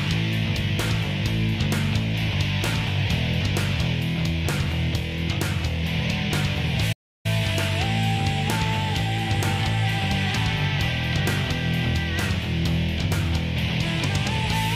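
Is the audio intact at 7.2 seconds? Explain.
No. A playback stall spans 6.92 to 7.26 s. The player likely ran out of data, so the sound falls silent for 0.32 s before resuming.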